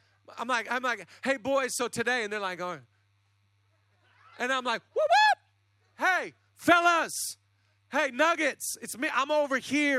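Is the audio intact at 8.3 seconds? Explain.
Yes, at 8.3 seconds the speech runs through cleanly with no dropout, click, distortion or other fault to be heard.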